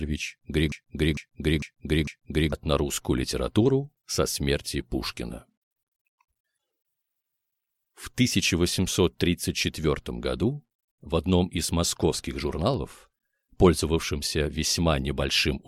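The audio falls into a broken-record loop from 0.72 to 2.53 s: a fragment of about 0.45 s plays four times back to back, identical each pass, and whatever should have sounded in that stretch never arrives. Unlike an echo, the repeats don't fade or overlap, and unlike buffer stutter, the cycles aren't short glitches. This most likely comes from the player, encoder or stream stalling and resending its last held chunk.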